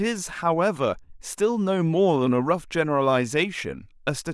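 No technical faults can be heard anywhere in the speech recording, with the signal continuous and intact throughout.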